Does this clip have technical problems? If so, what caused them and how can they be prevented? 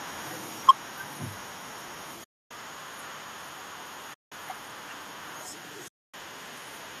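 Yes. Microphone overload, likely from input gain set too high, flattens the waveform peaks at 0.68 to 0.71 s. The sound is driven about 6 dB past full scale, with roughly a third of samples squared off, causing harsh crackle and broadband smear. Lowering the microphone input gain leaves headroom and prevents it.

Microphone volume stepped down at 0.70 to 0.71 s: the level drops by about 3 dB in one step, seen as a sudden shrink in waveform envelope, probably automatic gain control reacting to the clipping. Setting a proper fixed gain avoids triggering it.

AAC frame loss with muting causes soft-edged silent holes at 2.24 to 2.51 s (270 ms), 4.14 to 4.32 s (180 ms) and 5.88 to 6.14 s (260 ms). On a spectrogram these appear as blank vertical bands with faded edges, since lost frames, consistent with 10 ms AAC-ELD frames, decode as zeroed spectra. A more stable network connection or forward error correction prevents these dropouts.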